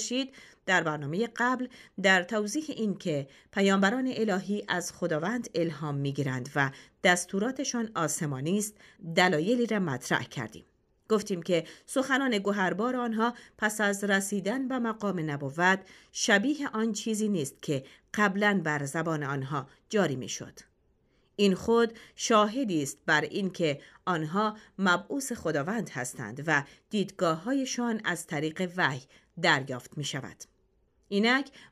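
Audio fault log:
No faults were found in this clip. Nothing in the audio calls for a timed entry.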